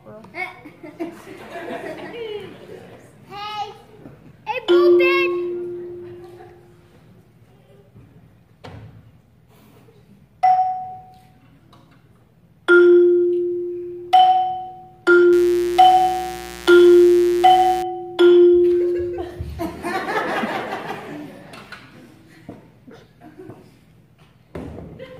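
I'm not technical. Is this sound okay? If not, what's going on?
No. From about 15.33 to 17.83 seconds there is mains buzz. Something in the electrical setup, such as a dimmer switch, a power adapter or an unshielded cable, let interference from the 60 Hz power supply leak into the recording. It arrives as sharp electrical spikes twice per power cycle, so you hear a steady, raspy buzz, quieter than the main sound, for those two and a half seconds.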